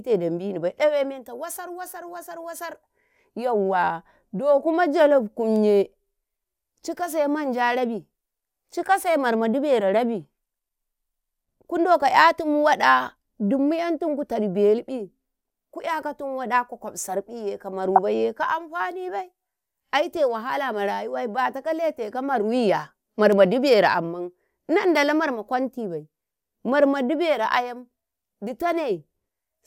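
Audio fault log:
17.85 to 17.99 s and 20.17 s, DAB burbling: bit errors at a low rate, roughly a fraction of a percent, slip past error correction into the MP2 data. Wrong samples cause short blips of noise in single sub-bands, and wrong scale factors make sub-bands jump in level for up to a frame. The spectrogram shows isolated bright rectangular patches confined to narrow bands.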